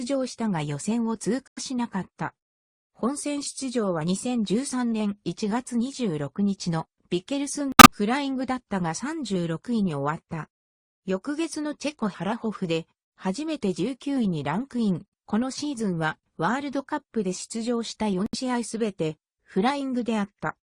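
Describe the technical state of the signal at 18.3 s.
At 18.3 s there is a corrupt frame muted fault. It runs from 18.26 to 18.35 s, a 90 ms gap, which fits three compressed frames of about 30 ms each. Those frames arrived damaged and the decoder rejected them. The player filled their place with silence. The sound cuts off abruptly and returns after the gap, and the timing of the audio is kept.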